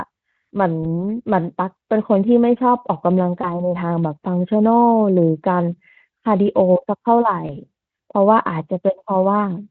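Speech carried over Speex at a light-damage rate shows VoIP packet loss concealed by the speech codec at 0.83–0.86 s, 3.41–3.72 s and 7.47–7.57 s. Each gap sounds like a single lost 20 ms frame that the decoder bridged by repeating the last pitch. On a spectrogram, the harmonics smear flat and fade. The waveform shows the envelope sagging until normal decoding recovers.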